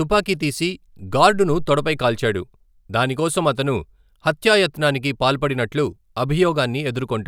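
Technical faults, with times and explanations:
No technical faults heard anywhere in the speech.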